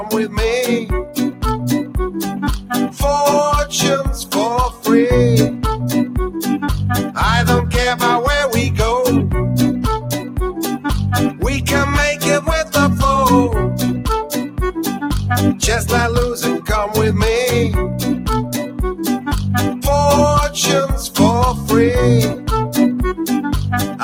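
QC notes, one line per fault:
Throughout: noise suppressor applied to music or sounds. A speech-oriented suppressor keeps treating steady content as noise, so level swings by around 10 dB as it clamps and releases. Sustained parts and decays thin and flutter while onsets pass, unlike a steady level change.
0.8 to 1.43 s, 10.2 to 10.38 s, 14.43 to 14.59 s, 18.45 to 18.8 s, 22.34 to 22.49 s, 23.87 s to the end: sound cut by the noise suppressor. Brief dips of about 7 to 9 dB where held or fading sound is mistaken for noise and pulled down, truncating tails rather than muting everything.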